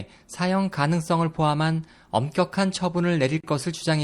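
MP3 compression damage runs throughout the speech: the treble is cut off and weak frequency components switch on and off between frames, giving a plainly audible watery, swirly texture with smeared onsets, likely from a low-bitrate encode that fits roughly 64 kbps.

A gap at a join of encoded pieces opens from 3.41 to 3.44 s, a gap of about 31 ms with smeared edges. Separately encoded segments were joined untrimmed, leaving encoder start delay and end padding in place before the sound resumes.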